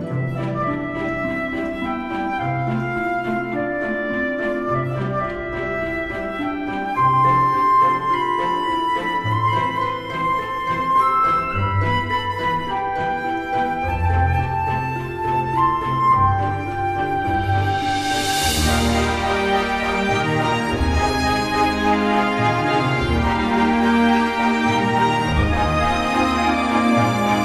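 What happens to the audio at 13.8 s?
At 13.8 s the audio plays through cleanly, with no dropout, click, glitch or other fault at that moment.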